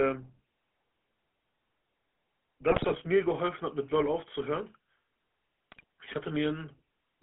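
The speech has a buzzy, gravelly roughness throughout, with a narrow band running from about 250 Hz to 3.4 kHz. This is plainly audible GSM full-rate codec damage. The codec models the vocal tract and drives it with a coarse, regularly spaced pulse excitation, which fits the 13 kbps full-rate coder. The voice also breaks into squawks and gargling from 2.70 to 2.95 s and again from 5.72 to 5.84 s. These are GSM bit errors, where corrupted filter, pitch or gain values distort the decoded speech over a run of frames.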